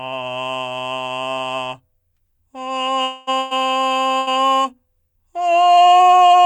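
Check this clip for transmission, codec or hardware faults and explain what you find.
The music has three transmission faults, all losses of audio on a network link, clustered between 3 and 4.3 seconds.

From 3.03 to 3.30 s, a long network dropout is likely: about 240 ms of audio never arrived, so the receiver stretched the last sound into a fading buzz or hiss, and the music resumes further on.

At 3.39 to 3.54 s and 4.19 to 4.30 s there are bursts of packet loss: about 120 ms and 80 ms went missing, and each gap is filled with a decaying continuation before playback skips ahead.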